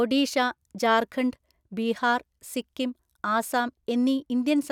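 No technical faults can be heard anywhere in the recording, and the signal stays intact throughout.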